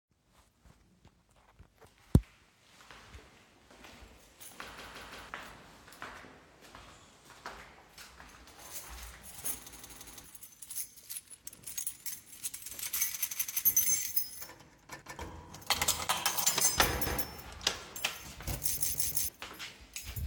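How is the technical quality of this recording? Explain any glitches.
The recording is marred by six stutters, each a repeated buffer. At 4.78, 9.73 and 18.77 s, a roughly 0.17 s slice plays three extra times. At 13.31 s it repeats twice, and at 15.02 and 17.07 s once. Each repeat joins abruptly. Fresh audio arrived late, so the playback device replayed its last block, which fits an 8192-sample buffer. About half a second of sound is lost at the longest stutters.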